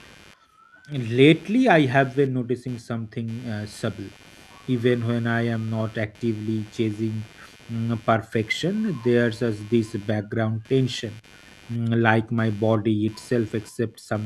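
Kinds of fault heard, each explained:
Computer activity noise: processor and peripheral load shifts disturb the audio circuit's shared ground, putting a buzzy pulsing of roughly 100 per second about 25 dB below the speech throughout, independent of it; a spectrogram shows evenly spaced harmonic lines and bursty vertical striping.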